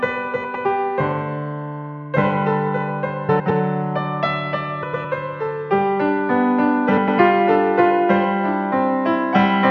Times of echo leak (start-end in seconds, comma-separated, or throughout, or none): none